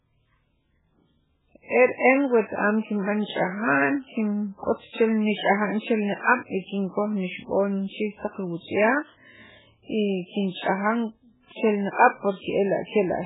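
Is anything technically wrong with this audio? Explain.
Yes. Throughout the speech, nothing sounds above 3.8 kHz and the sound turns watery and swirly, likely heavy MP3 compression at a starved bitrate near 8 kbps. A spectrogram shows a hard ceiling and flickering holes.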